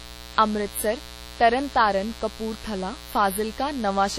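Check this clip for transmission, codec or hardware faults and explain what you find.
Two faults run through the whole speech clip: a mains buzz and damage that is likely from WMA compression.

The mains buzz sits under the speech from start to finish, roughly 20 dB below it, and is built on 60 Hz. Something like a dimmer, rectifier or unshielded lead lets sharp switching spikes into the signal twice per mains cycle. Those spikes carry harmonics far up the spectrum, so the result is a raspy, edgy buzz rather than a smooth hum. A plain ground-loop hum would sit mostly at 60 Hz and 120 Hz and sound rounder and duller.

The second fault is also present throughout. The speech has a ringing, washy quality, and a hiss swells and fades with it. The top of the spectrum stops cleanly at about 17.9 kHz. This is the heavy damage of a transform codec, most likely WMA at a low bitrate, which fits something around 32 kbps. 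Long transform blocks smear quantisation noise over tens of milliseconds around each sound, and weak spectral lines are dropped entirely. The noise that breathes with the speech is what separates this from steady background hiss or a simple low-pass filter.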